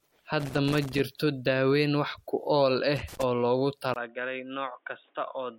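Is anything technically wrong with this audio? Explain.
Yes, there are three faults.

Generation loss runs through the whole clip. The speech sounds swirly, smeared and hollow, with blurred attacks and nothing above 16.6 kHz. This is likely from MP3 coding at 64 kbit/s repeated about three times. Each pass requantises on a shifted frame grid, so the noise and spectral holes accumulate.

Loose connector crackle occurs from 0.40 to 1.00 s, just before "daaweyn wax ku ool", and again from 2.97 to 3.23 s, between "daaweyn wax ku ool" and "oo loogu". A bad contact making and breaking chops the signal into irregular bursts of crackle and scratching.

Input switched to a poorer device at 3.94 s, right after "oo loogu", and stays that way to the end. There is a 20 ms silence at the switch. After it the sound turns dull and boxy, with nothing above 3.8 kHz. The level drops by about 10 dB, and a new noise floor sits roughly 40 dB below the signal. 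This likely reflects the system changing to a narrower-band microphone or a headset call profile.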